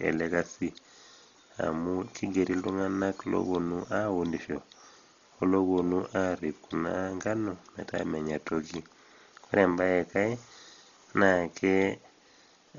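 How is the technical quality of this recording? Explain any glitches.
The technical quality is poor, with heavy coding damage throughout the speech. From start to finish the sound is dull, with nothing above about 6.9 kHz, and the voice carries a rough, fluttering noise. This is likely Dolby Digital compression at a very low bitrate, consistent with roughly 32 kbps. The encoder narrows the band and leaves many frequency lines without detail, and the decoder fills those gaps with noise.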